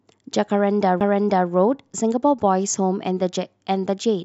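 At 1.00 s, a CD skip: the laser jumps to another turn of the spiral, so a tick and very brief mute interrupt the speech before playback resumes elsewhere.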